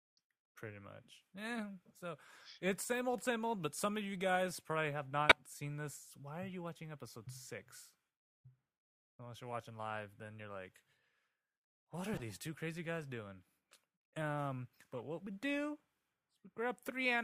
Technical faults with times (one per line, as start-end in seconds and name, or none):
5.29-5.36 corrupt frame decoded
12.13-12.24 corrupt frame decoded
14.93-15.00 corrupt frame decoded